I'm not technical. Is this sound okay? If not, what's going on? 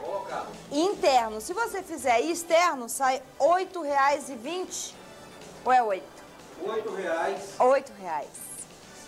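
Yes, nothing technical goes wrong anywhere in this recording, so the signal holds up steadily the whole way.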